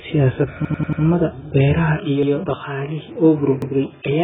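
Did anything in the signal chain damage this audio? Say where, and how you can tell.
Yes. The damage sits at three stages.

At the codec stage, the whole clip is band-limited with nothing above 3.7 kHz, and the speech has a heavily smeared, warbling texture. That points to AAC compression at a very low bitrate, around 8 kbps, where the encoder drops the upper band and starves the rest. Because it is present from the first instant, it reads as encoding, not as something that happens to the capture partway through.

At the driver or buffer stage, a repeated buffer is audible three times. From 0.65 to 1.02 s, one piece of about 93 ms plays four extra times as a stutter with hard joins. Single extra plays follow at 2.23 to 2.32 s and 3.62 to 3.72 s. The piece length fits a 4096-sample buffer. Nothing goes missing. Exact repeats with hard joins set this apart from network concealment, which smooths or fades over the gap.

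At the capture stage, the input switched to a poorer device at 1.98 s and stayed there to the end. This is the likely cause. The tone turns boxier, a new background noise appears about 35 dB below the speech, and the top now stops near 3.8 kHz. There is no silence and no level jump at the change. The abrupt shift at one moment, with a fresh noise floor, separates it from the codec limit that runs throughout.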